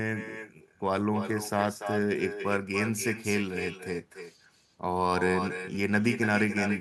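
Throughout, the far end plays the call over a loudspeaker and its microphone sends it straight back with nothing to cancel it: echo with no canceller. Every phrase returns roughly a third of a second later, about 8 dB quieter and thin.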